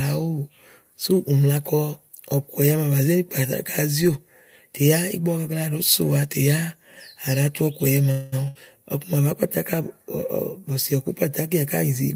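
At 8.11 s the speech stalls into a call audio freeze lasting until 8.46 s. The last sound is stretched into a buzz or hiss that fades for about 0.2 s, likely because delayed packets left the jitter buffer empty. The speech then resumes where it stopped, nothing lost, only late. A spectrogram shows the held sound smeared flat and thinning out, and the waveform shows the held sound shrinking.

Right after, from 8.48 to 8.57 s, a burst of packet loss removes about 80 ms of speech. The receiver covers roughly 70 ms with a decaying continuation of the previous sound, then jumps ahead. On a waveform this appears as a short held stretch that tapers, followed by an abrupt change. The spectrogram shows a brief held band and then a discontinuity.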